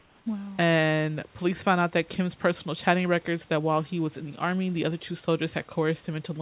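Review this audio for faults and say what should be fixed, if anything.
From 0.0 to 0.26 s, the room background gives way to a smooth, featureless hiss. It sits about 2 dB quieter than the real background. This is comfort noise in place of the background, likely from discontinuous transmission filling the gap before speech begins. Disable DTX on the sender so the real background is always transmitted.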